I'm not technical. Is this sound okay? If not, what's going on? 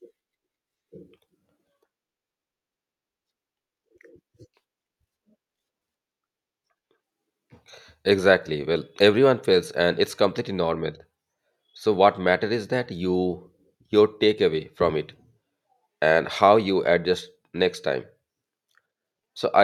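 No. There are two brief clicks in the speech: one at 10.05 s, right after "everyone fails and", and another at 17.14 s, after "and how you". These are likely dropped samples, where a tiny fraction of a millisecond of audio went missing, making the sound jump abruptly.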